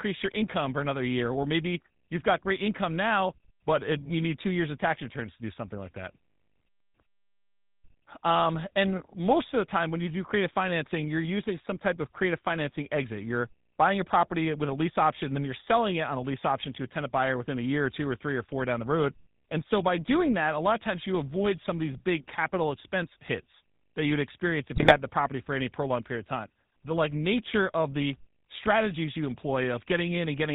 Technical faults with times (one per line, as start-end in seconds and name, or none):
0.00-30.54 GSM full-rate codec
24.74-24.95 GSM bit errors